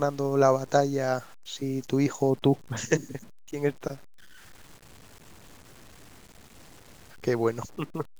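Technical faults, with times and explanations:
Throughout, low bit depth without dither: the speech was likely cut to about 8 bits by plain truncation, so rounding error tracks the signal, leaving a grainy distortion roughly 30 dB below the speech that roughens quiet syllables and sputters or drops out in the softest moments.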